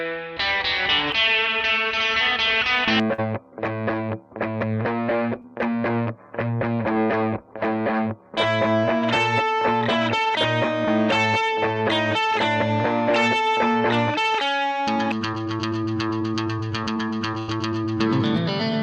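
At 3.13 to 3.20 s and again at 5.42 to 5.45 s, short concealed packet loss occurs. The packets arrived too late or not at all, so the receiver extended the preceding sound across the hole, about 45 ms and then 13 ms, and blended back in. The result is a brief smear or wobble where 40 ms and 20 ms of real audio are gone.

From 17.39 to 17.50 s, a burst of packet loss removes a longer stretch. The receiver continued the last sound for about 85 ms while turning it down, which gives a held, fading tail, then picked up 80 ms further on with that audio missing.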